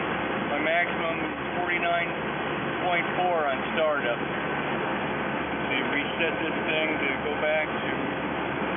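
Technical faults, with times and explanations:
No technical faults can be heard anywhere in this audio; the signal stays continuous and steady, with nothing disturbing its level, timing or tone.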